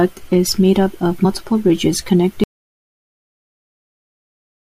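Just after "is made up of", at 1.24 s, compressed frames are skipped. About two 21.3 ms frames go missing, so the speech jumps ahead roughly 40 ms. At 2.44 s the audio drops out to silence and stays silent to the end, with no room tone. The input was likely lost while recording continued.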